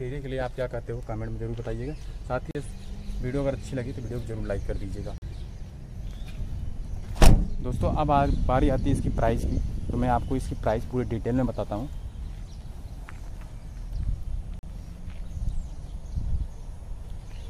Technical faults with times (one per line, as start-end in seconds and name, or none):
2.51-2.55 block of digital silence
5.18-5.22 block of digital silence
14.59-14.63 block of digital silence